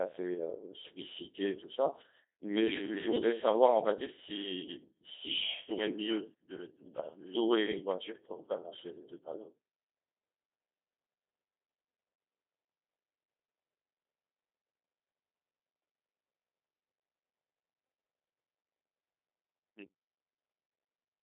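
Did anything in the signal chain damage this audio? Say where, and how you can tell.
Yes. The damage is at the codec stage and runs through the whole speech clip: a Codec 2 vocoder. The audio sounds robotic and buzzy, band-limited to roughly 300 Hz–3.7 kHz with nothing above 3.8 kHz. The waveform is resynthesised from pitch, voicing and envelope parameters, consistent with about 2.4 kbit/s.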